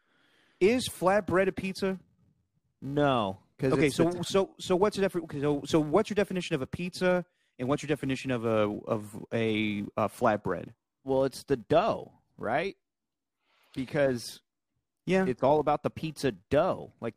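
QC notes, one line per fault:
Throughout: filter restarted on every block. A steady buzz at 345 Hz sits under the speech, rising and falling with its level. The filter appears to lose its state at each block boundary and start again from silence, so every block opens with a small transient. Those transients repeat at the block rate and fuse into a pitched buzz rather than separate ticks. The 345 Hz rate fits a 128-sample buffer.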